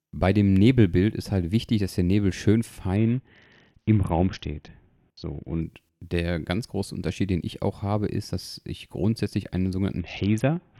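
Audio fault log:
2.96–5.61 s, Bluetooth SBC bit pool drop: treble dulls and gritty noise rises before "der ganz große". The encoder starved the upper sub-bands, which fits a bit pool falling from 28 to near 6.
10.00–10.79 s, Bluetooth SBC bit pool drop: after "dass ich grundsätzlich einen", the same dull, gritty sound returns to the end, which fits roughly 60 kbps.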